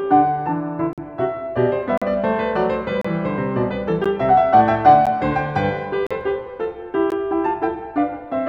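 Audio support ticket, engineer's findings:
Gap between stream segments: hard-edged silent holes of 13 to 47 ms in the music at 0.93–0.98, 1.98–2.02, 3.01–3.05, 4.04, 5.06, 6.07–6.11 and 7.10 s. The roughly once-per-second spacing fits 1 s segments. Segment timestamps leave small gaps, and the player fills them with silence.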